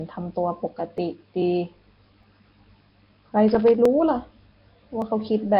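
Nellymoser compression runs through the whole speech clip. The speech is likely passed through the old Flash microphone codec, which codes short blocks at a fixed, very low bit depth. Heavy damage points to a rate around 22 kbps. Bands that were starved of bits come back as filler noise. The voice has a rough, hissy halo and a smeared, underwater blur throughout.

Dropped samples give a single sharp click at 0.98 s and again at 2.23 s. The likely cause is a sliver of the stream, under a millisecond, going missing. The waveform then jumps straight from one value to a later one. The gap is too brief to remove any sound, so all that is heard is a tick with a thin vertical streak across the spectrum.

Loose connector crackle fills 3.48 to 3.75 s. A worn or dirty contact keeps making and breaking as it shifts, chopping the signal on and off. This produces an irregular burst of scratchy crackle lasting about a quarter of a second.

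Dropped samples return at 3.85 s and 5.02 s, as the same isolated sharp clicks.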